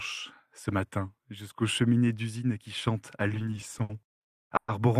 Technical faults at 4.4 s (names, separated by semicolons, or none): repeated stalls (stutter)